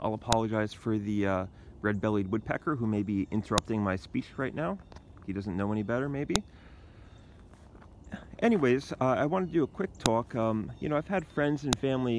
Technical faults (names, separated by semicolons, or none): file header played as audio